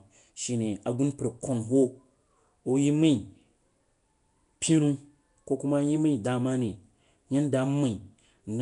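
Throughout, the speech carries a rough, hissy halo and a smeared, underwater quality with nothing above 10.7 kHz, likely Nellymoser compression, whose starved bands were noise-filled.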